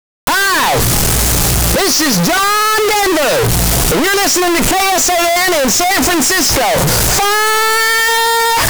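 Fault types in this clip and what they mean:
Float read as integer: 32-bit floating-point samples were likely decoded as 32-bit integers, so sign and exponent bits dominate each value. The waveform turns nearly square at an almost fixed, high level, leaving the audio very loud and harsh throughout, with background noise as loud as everything else.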